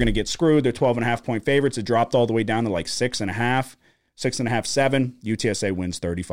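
Speech, no faults heard.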